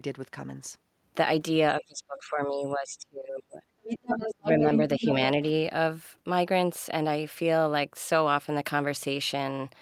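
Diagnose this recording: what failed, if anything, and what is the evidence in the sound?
Call processing is where this failed: speech suppressed in double talk appears from 1.8 to 3.62 s, then again at 4.37 to 4.62 s and 4.95 to 5.2 s. The speech dips hard, by something like 30 dB at its deepest in the first stretch and slightly more in the second, while the third is a shallower duck of roughly 10 dB. This is likely an echo canceller muting both talkers, not a dropout or a gain fault.

The other side's voice leaking through is heard from 3.83 to 4.78 s and briefly at 5.01 to 5.1 s, sitting only a few dB below the main speech. Again the stage is likely call processing: loudspeaker sound reached the microphone and the echo canceller left part of it in. It differs from crosstalk in wiring because it coincides with the suppression dips, showing the canceller struggling with the same overlap.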